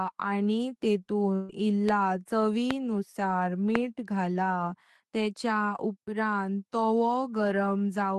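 From 1.35 to 1.64 s there's a burst of packet loss: the receiver holds and fades the last sound for about 136 ms, then jumps ahead, skipping roughly 140 ms of speech. Then come three loud pops at 1.89, 2.71 and 3.75 s, each a sharp click roughly 15 to 20 dB above the speech and lasting about 20 ms, with the speech running on beneath, likely from a voltage spike.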